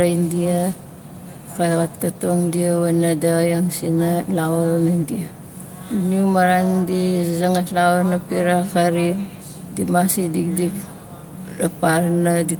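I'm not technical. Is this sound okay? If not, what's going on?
Yes, no technical faults are audible anywhere in this recording.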